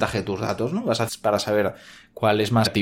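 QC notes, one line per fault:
1.07–1.09 s and 2.65–2.67 s, damaged data in a compressed stream: each is a brief glitch lasting about 20 ms that cuts into the speech. At both points part of the compressed stream has been corrupted, so the decoder misreads or refuses the affected frames. It then loses sync and has to find the next valid frame header before clean decoding resumes.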